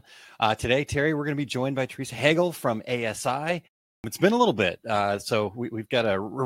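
At 3.94 s, after a 0.34 s pause, "it's been a little" begins with a clipped start after a pause. The idle output path needs 100 ms to wake, losing the opening sounds until 4.04 s. The waveform jumps from flat silence to full level, and the spectrogram shows energy beginning mid-syllable.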